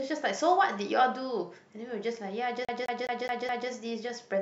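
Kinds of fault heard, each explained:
CD stuck on one turn: a scratch keeps throwing the laser back one track each time the disc comes round, so the same slice of speech, about 210 ms long, plays five times over from 2.65 to 3.70 s, with a brief mute at each jump.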